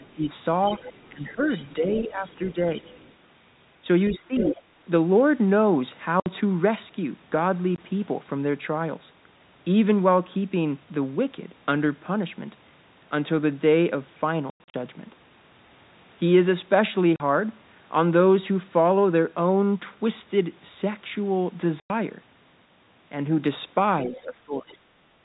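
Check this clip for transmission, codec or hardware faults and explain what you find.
Four kinds of fault are audible: the talker being pulled down during overlap, a second voice bleeding through, holes of silence in the stream, and a brief dip in the room sound at the very end.

Speech suppressed in double talk: at 0.0 to 0.26 s, 1.09 to 2.58 s, 4.1 to 4.56 s and 24.06 to 24.89 s the talker's level sags by roughly 15 dB at its deepest, thinning or breaking into pieces. Each dip coincides with the other party talking at the same time. The likely cause is an echo canceller that could not tell the near voice from loudspeaker echo during overlap and attenuated everything together.

Other side's voice leaking through: a fainter second voice sits under the talker from 0.65 to 3.13 s at around 20 dB down, from 4.14 to 4.62 s at around 10 dB down, and from 24.16 to 24.75 s at around 25 dB down. 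The device is likely playing the far end through a loudspeaker, and the canceller left some of that pickup in the microphone signal.

Packet loss filled with silence: hard-edged dropouts cut the speech at 6.2 s (60 ms), 7.76 s (20 ms), 17.16 s (40 ms) and 21.8 s (100 ms). Between 14.5 and 14.74 s a scattered cluster removes about 180 ms in total, with the longest gap 100 ms. Every gap is a multiple of 20 ms, which fits 20 ms packets that were lost and replaced with nothing.

Background gated by the echo canceller: in the last moment, from 25.17 s to the end, the room sound dips by about 6 dB for roughly 70 ms. Instead of fading naturally, the ambience briefly ducks. The likely cause is the canceller clamping the microphone while the loudspeaker was active, and the clip ends before it releases.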